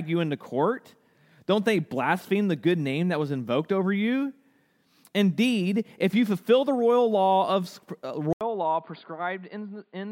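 At 8.33 s, right after "royal law of uh", the speech drops out for about 80 ms and comes back duller and boxier, a few decibels quieter, with nothing above 4.8 kHz and a faint new background noise far below the voice. It stays that way to the end. The likely cause is that the input switched to a poorer device, such as another microphone or a headset's call profile, whose narrower band and own noise replace the original pickup.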